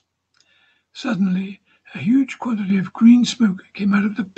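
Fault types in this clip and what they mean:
Microphone volume stepped up: the call software judged the microphone input too quiet and raised the device's input gain in one jump of about 6 dB at 2.7 s. Because the change happens at the microphone, before any other processing, the speech and the background noise get louder together at that instant, with no gradual ramp. The level steps up partway through the clip and holds there, carried through the Opus call path, which passes content up to about 8 kHz.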